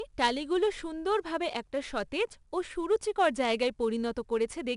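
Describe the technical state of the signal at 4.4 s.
At 4.4 s the speech carries 4-bit ADPCM compression throughout: coarse adaptive-step coding adds gritty, level-following hiss, a broadband spectrogram haze stopping at 10.6 kHz.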